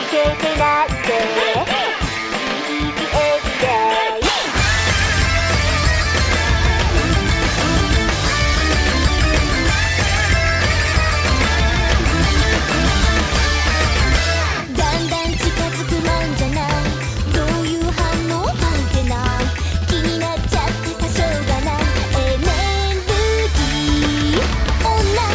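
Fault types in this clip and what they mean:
There are no fault types in this clip.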